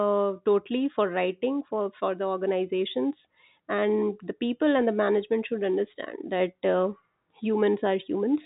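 No technical faults can be heard anywhere in the recording. The speech comes through G.711 mu-law telephone coding at 64 kbps, so nothing above 4 kHz remains, and at most a faint quantisation hiss rides along with the level.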